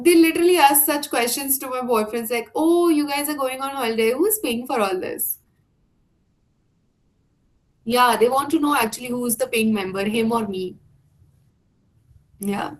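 At 6.25 s the adaptive stream drops to a lower bitrate; the quality changes abruptly, the waveform shows no gap, and codec artefacts rise in the speech.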